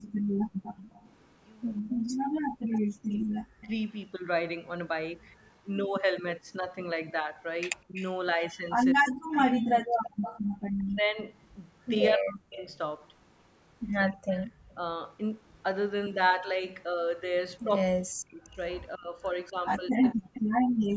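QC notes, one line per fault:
0.02–5.61 s, 7.94–10.41 s, 12.74–20.41 s: echo leak. A delayed copy of the speech trails by 184, 207 and 233 ms, at about 25, 15 and 15 dB below, likely residual loudspeaker pickup the echo canceller missed.
0.12–0.63 s and 10.42–10.50 s: background gated by the echo canceller. Room tone drops by about 37 dB, then about 21 dB, as the canceller clamps the microphone during far-end playback.
1.91–3.73 s, 7.87–14.82 s, 17.87 s to end: speech suppressed in double talk. The talker dips by roughly 40 dB in pieces, likely the canceller attenuating both sides during overlap.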